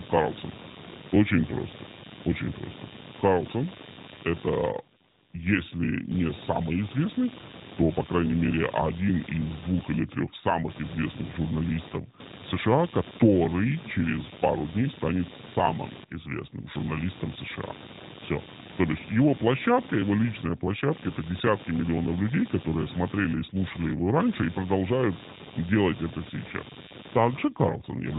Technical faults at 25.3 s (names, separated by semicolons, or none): computer activity noise